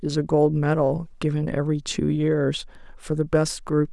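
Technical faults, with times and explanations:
No technical faults can be heard anywhere in the recording.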